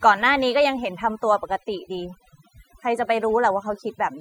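From start to finish, the speech carries overdone noise removal: aggressive suppression gates individual frequency bands near the noise floor, stripping quiet vocal detail. The background drops to near-silent gaps dotted with twinkling specks. A spectrogram shows isolated bright flecks scattered across a blacked-out background.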